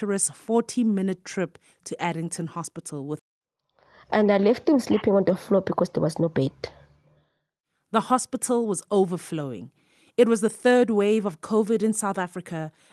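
At 3.2 s the speech skips ahead: roughly a second and a half of audio is missing, and the two sides are joined directly with no silence in between. It sounds like an abrupt jump, and nothing is concealed or filled in. On a waveform the envelope changes suddenly at the join, and a spectrogram shows a vertical seam where harmonics and formants break off and resume at unrelated positions.

From 4.16 to 6.48 s, and again from 7.41 to 8.93 s, there is a jitter buffer speed-up. The receiver was holding more audio than it aims for, so it cut out short pitch-period-sized pieces repeatedly to reduce the delay. The first stretch runs at 112% speed and loses about a third of a second. The second runs at 109% and loses about a sixth of a second. Pitch stays the same, but the speech sounds hurried. On a spectrogram, syllables and formant transitions look horizontally compressed while the harmonic spacing is unchanged, and the waveform shows shortened voiced segments. 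Throughout, the band stops near 12 kHz, which fits Opus at around 24 kbps on the call path.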